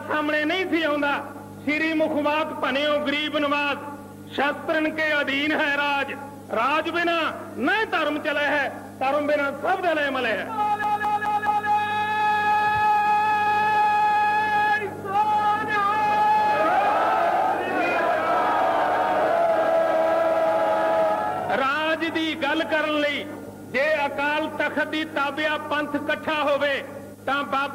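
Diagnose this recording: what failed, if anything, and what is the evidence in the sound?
Playback failed: from 10.83 to 11.68 s the sound is caught by a CD stuck on one turn. A single 210 ms slice plays four times in a row, each pass cut off by a brief mute as the pickup jumps back, which produces a rapid, perfectly even stutter. The mechanism is a scratch knocking the laser back one track at the same angular point on every revolution. On a waveform the four segments are identical copies separated by tiny flat gaps; a spectrogram shows the same pattern stamped four times, split by thin vertical blank lines.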